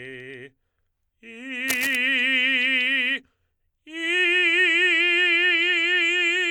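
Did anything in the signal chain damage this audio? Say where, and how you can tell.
Yes: cable scratch noise from 1.68 to 1.95 s, a rough rustling burst about 10 dB below the music, likely from a worn analogue cable or connector shifting contact.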